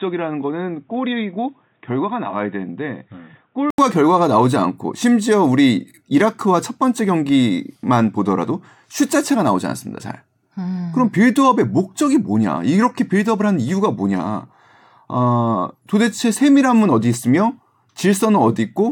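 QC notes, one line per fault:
0.00–3.78 s, input switched to a poorer device: the opening is dull and boxy, with nothing above 3.8 kHz, a few dB quieter and carrying its own faint noise floor around 45 dB down. At 3.78 s an 80 ms silence precedes full-band, cleaner sound. This is likely a change of capture device, not a filter or codec drop, because tone, level and background noise all shift together at one break.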